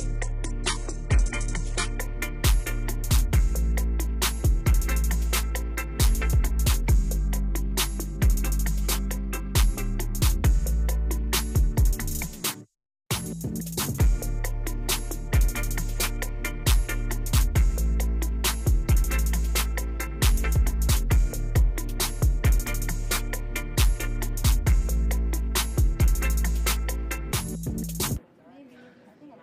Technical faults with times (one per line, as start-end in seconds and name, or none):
0.00-2.00 adaptive stream starting at a low bitrate